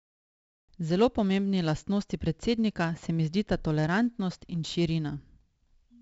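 4-bit ADPCM compression throughout: coarse 4-bit prediction steps leave heavy, gritty hiss riding the speech, with nothing above 7.7 kHz, which fits a 64 kbps stream.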